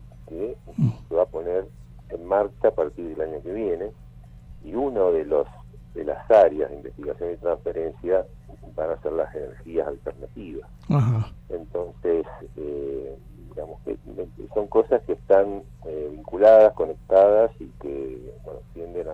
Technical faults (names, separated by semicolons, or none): repeated frames